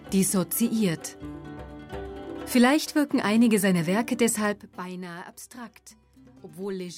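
Zipper noise runs from 4.46 to 4.88 s, a ticking, zipping texture laid over the sound as its level falls by roughly 15 dB. The drop is made in 2 dB jumps with no smoothing between them, about twenty a second, so each jump leaves a small click and the clicks string together into a rasp.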